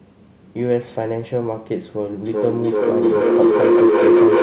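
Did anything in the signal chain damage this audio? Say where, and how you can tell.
Yes. Feedback howl in the call's acoustic loop, from 2.26 s to the end. A tone of roughly 400 Hz swells to about 9 dB above the speech, with the loop repeating around every 0.4 s. Two devices share a room. Each mic-to-speaker pass adds gain, so repeats grow instead of fading.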